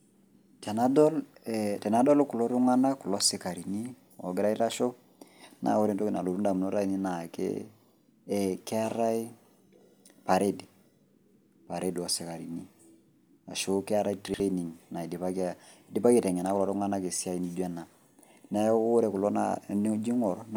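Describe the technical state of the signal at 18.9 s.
At 18.9 s the speech signal is intact, with no fault audible at that moment.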